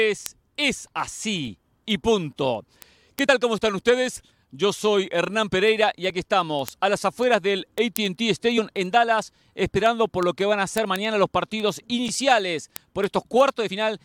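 From 0.17 s to the end, word clock ticks of uneven strength run through the speech about ten times a second: the receiver isn't locked to the sender, drifting roughly 200 ppm, and each slip drops or repeats a sample. At 1.47 s a corrupt frame gets decoded anyway, and that single damaged frame puts energy at the wrong frequencies for a moment, peaking somewhere around -35 dBFS. Then compressed frames are skipped at 3.23 s and again at 8.57 s: the audio jumps ahead by about 50 ms and then about 20 ms.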